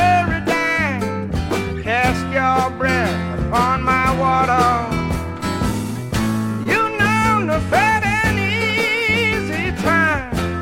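At 6.63 to 6.67 s there is a brief smear with a wobble, where a moment of sound seems stretched and then rejoins. This is short concealed packet loss: about 20 ms never reached the decoder in time, so the receiver extended the preceding sound to fill the gap and crossfaded back.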